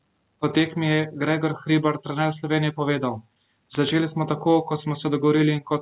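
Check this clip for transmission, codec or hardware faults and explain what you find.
No transmission, codec or hardware faults turn up in this clip.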